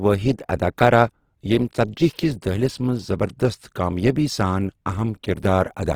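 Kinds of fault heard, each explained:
Opus compression: throughout the speech, tones turn plainly rough and grainy rather than swirly, as starved bands are refilled with folded or noise content while each band's energy is kept. Sound still reaches 20.2 kHz, likely Opus music mode near 16 kbps.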